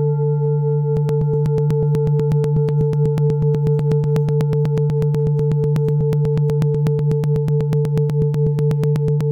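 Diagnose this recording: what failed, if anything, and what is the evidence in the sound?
Looks like periodic USB or driver dropouts at the driver or buffer stage. From 0.97 s to 9.21 s there's a small tick every 0.123 s, about seventy in all, where a couple of milliseconds get skipped outright each time something stalls the bus or driver.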